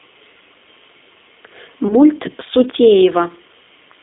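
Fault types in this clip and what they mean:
G.729 codec: the whole clip runs through this 8 kbit/s voice codec, rebuilt from a vocal tract model plus a few pulses per frame, so the speech sits in a narrow line band of roughly 250 Hz to 3.7 kHz and has a plainly rough, slightly synthetic edge.
VoIP packet loss concealed by the speech codec: around 1.88 to 1.97 s a short gap, which fits about 20 ms of lost packets, gets papered over by the decoder extending the previous sound, giving a brief, fading smear before the speech settles again.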